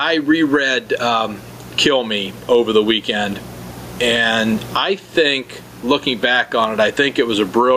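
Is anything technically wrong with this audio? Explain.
Yes. Gain pumping runs through the whole clip. The level swings by roughly 10 dB. Loud and soft parts sit too close together. The likely cause is input gain set far too high, with a fast limiter clamping it down.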